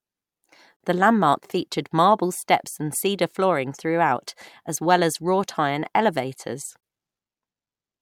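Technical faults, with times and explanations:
0.76–0.80 s and 6.80–6.83 s, gap at a join of encoded pieces: the speech drops out for about 40 ms, then 24 ms, six seconds apart, with smeared edges. Each piece was encoded separately and joined untrimmed, so encoder start delay and end-frame padding stayed in as silence.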